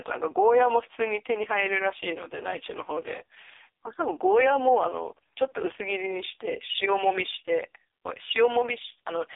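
Speech was coded throughout with the AMR narrowband mobile codec at a very low rate, which fits the 4.75 kbps mode. This confines it to a 300 Hz to 3.6 kHz line band with nothing above 3.7 kHz, and leaves the voice heavily buzzy and synthetic.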